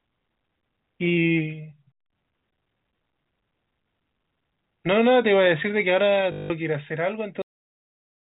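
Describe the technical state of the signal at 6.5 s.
At 6.5 s, packet loss with last packet repeated ends: from 6.32 s, 180 ms of lost audio was filled by replaying the last packet, which fits 20 ms packets. It buzzes robotically at 50 Hz. A waveform shows identical 20 ms segments with jumps between them, and a spectrogram shows evenly spaced vertical stripes.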